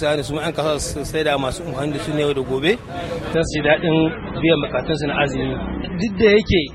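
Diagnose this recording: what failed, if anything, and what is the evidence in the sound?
Network side: this is an adaptive stream switching to a lower bitrate. At 3.34 s the quality drops suddenly with no gap and stays degraded to the end. Nothing is left above 9.3 kHz and the artefacts rise, which fits MP3 stepping down from roughly 128 to 16 kbit/s.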